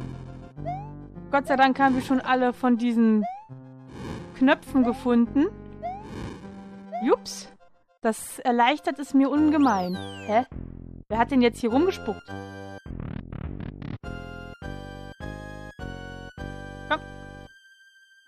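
Nothing stood out as a technical fault on listening to the clip.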